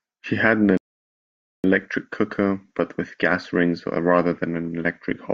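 A rebuffering stall runs from 0.77 to 1.64 s: after "had an" the speech drops to silence for about 0.87 s, then resumes with "cooker but with gas" exactly where it paused. The player exhausted its downloaded audio and waited, adding time without losing any.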